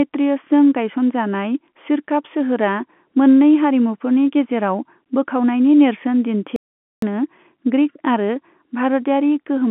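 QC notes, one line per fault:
6.56 to 7.02 s, audio dropout to silence: speech drops to silence for 0.46 s with no room tone, likely the input link briefly lost.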